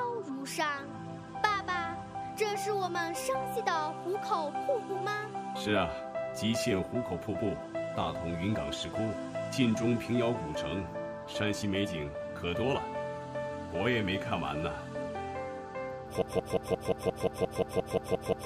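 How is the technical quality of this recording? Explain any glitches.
The recording has one serious glitch near the end. At 16.22 s a broken-record loop begins and runs to the end of the clip. A fragment about 176 ms long repeats exactly, back to back, thirteen times. It sounds like a rapid, mechanical stutter with no forward motion. The cause is likely a stalled player, encoder or stream that kept resending the last piece it held. Whatever should have played after 16.22 s is lost.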